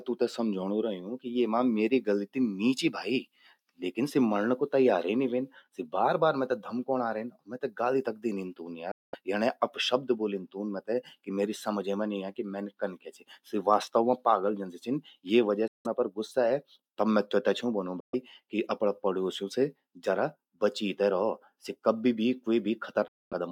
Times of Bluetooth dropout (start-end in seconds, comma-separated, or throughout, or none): 8.91-9.15, 15.68-15.86, 18.00-18.15, 23.08-23.33